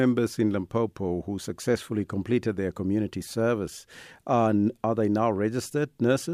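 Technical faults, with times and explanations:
Nothing technical goes wrong anywhere in this speech recording, so there's nothing to point to here.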